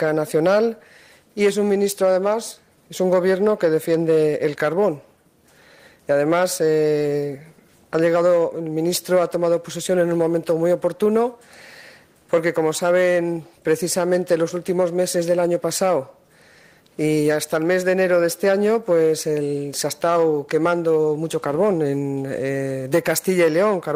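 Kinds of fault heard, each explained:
No technical faults are audible.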